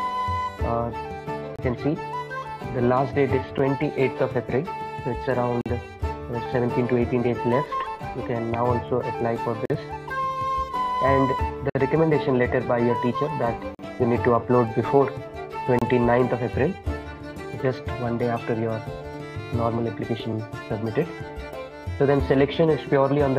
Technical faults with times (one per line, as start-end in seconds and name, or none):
1.56-1.59 gap between stream segments
3.58 gap between stream segments
5.61-5.66 gap between stream segments
7.65 gap between stream segments
9.65-9.70 gap between stream segments
11.70-11.75 gap between stream segments
13.75-13.79 gap between stream segments
15.79-15.82 gap between stream segments